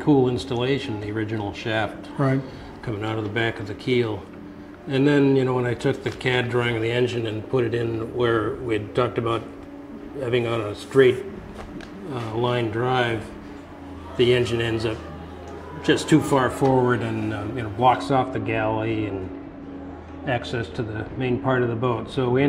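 Sound that runs clean until about 17.99 s, then goes dull and muffled right through to the end. That's de-emphasis applied wrongly: a treble-cutting curve landed on audio that never had pre-emphasis, or was applied a second time, sloping the highs smoothly down by about 14 dB at 10 kHz relative to 1 kHz.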